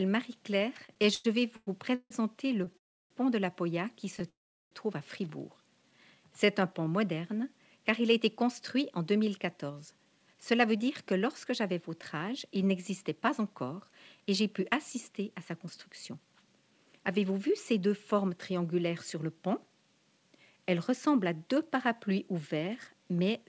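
Repeated stalls (stutter) run from 0.80 to 2.76 s, where eleven brief hold-ups break the flow. Packets arrived late, the jitter buffer kept draining, and the receiver stretched the last sound to fill about 459 ms, the longest gap 157 ms, so the audio drags and judders. A shorter burst of three tiny stalls, none over 11 ms, catches at 4.17 to 4.25 s.

A call audio freeze follows at 2.78 to 3.12 s, and another at 4.29 to 4.73 s. The likely cause is packets held up in transit, emptying the buffer. The last sound fades out, leaving about 310 ms and then 370 ms of near-silence, before the audio resumes where it stopped, later but intact.

A jitter buffer slow-down from 5.82 to 6.90 s plays the audio at 89% speed with unchanged pitch. The receiver rebuilt its reserve by repeating single pitch periods and slivers of pause, adding 125 ms, so sounds come out drawn out.

A jitter buffer speed-up spans 8.20 to 19.23 s, running at 107% speed with the pitch held steady. 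Too much audio had banked up in the buffer, so short pieces of a pitch period or two were cut again and again, about 0.7 s in total, giving a hurried feel. Across the clip nothing is heard above 8 kHz, which fits the G.722 call codec at 64 kbps.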